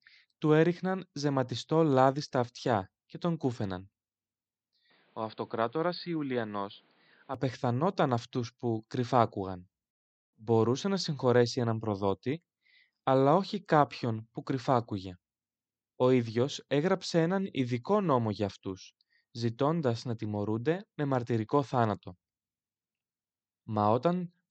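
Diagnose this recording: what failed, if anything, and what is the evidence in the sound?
Between 4.9 and 7.3 s the speech goes boxy, nothing above 4.9 kHz, about 5 dB down: likely the input switched to a poorer device.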